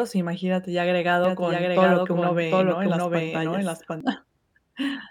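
Doubled audio track, 1.24 to 4.01 s: an equally loud copy trails about 0.7 s behind, likely from a slower second capture, with abrupt edges.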